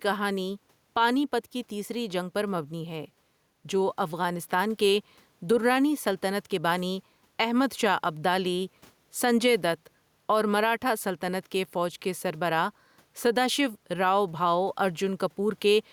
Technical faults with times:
0.00-15.92 gain pumping

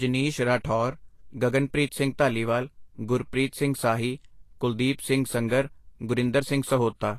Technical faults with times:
0.00-7.19 Vorbis compression

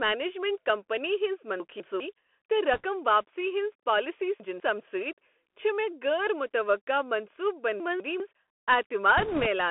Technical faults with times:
0.00-9.71 Bluetooth CVSD headset codec
1.60-2.00 chunks out of order
2.74-2.85 bit errors on a Bluetooth voice link
4.40-4.80 chunks out of order
7.80-8.20 chunks out of order
9.18-9.46 bit errors on a Bluetooth voice link

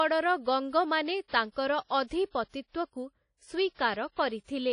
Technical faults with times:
0.00-4.73 WMA compression
1.28-1.33 pre-echo
2.30-2.54 pre-echo
3.74-3.79 pre-echo

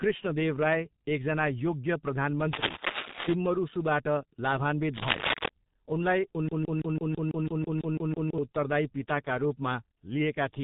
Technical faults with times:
0.00-10.63 G.723.1 codec
2.53-3.34 cable scratch noise
4.93-5.49 cable scratch noise
6.48-8.38 broken-record loop

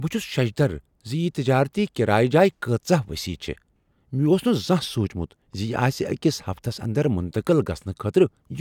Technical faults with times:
none

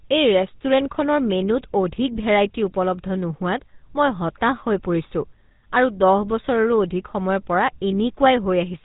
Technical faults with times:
0.00-8.84 GSM full-rate codec

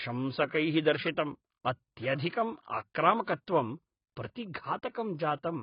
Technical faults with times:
0.00-5.62 AAC compression

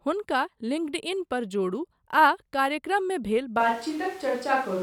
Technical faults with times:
3.61-4.83 switch to a distant microphone

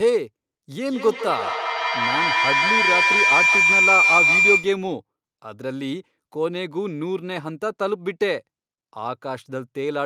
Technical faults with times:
0.83-4.85 feedback howl

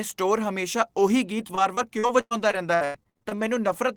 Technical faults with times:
1.39-3.74 repeated packet loss (robotic sound)

